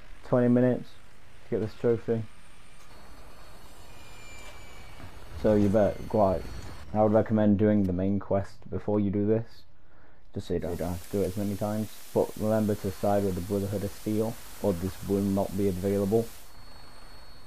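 From 10.58 to 16.58 s, digital radio blending to analogue: a 243 ms crossfade to FM brings hiss about 20 dB down, broadband noise floor on spectrogram, level dropping about 2 dB.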